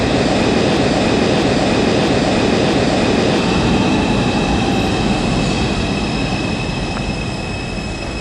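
A broken-record loop runs from 0.77 s to 3.39 s. A fragment about 0.65 s long plays four times in a row, each pass identical and butted straight against the next. Nothing new comes through during those seconds. The audio that belonged there is simply gone, and the sound picks up again after the last repeat. The likely cause is a stalled player, encoder or stream that kept resending the last piece it held.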